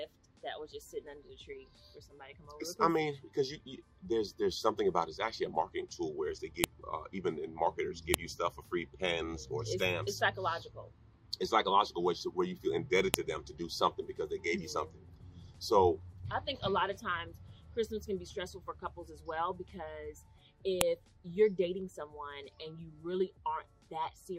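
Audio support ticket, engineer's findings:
File header played as audio: sharp, loud click at 6.64, 8.14, 13.14 and 20.81 s, each under a few ms. Probable component: file concatenation or streaming stage. Mechanism: WAV header bytes of each joined piece decoded as sample values. Differs from clipping or a dropout click because the snap has the same form every time, is unrelated to signal level, and falls only where a new piece begins.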